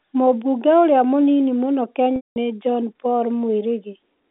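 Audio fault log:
2.16–2.36 s: packet loss with pitch repetition, right after "ũrĩa mũnini mũno". About 200 ms of audio went missing, which fits roughly ten lost packets. The receiver filled the hole by looping the last pitch period, giving a held, buzzy tone that fades toward silence before the speech cross-fades back in over the narrow telephone band.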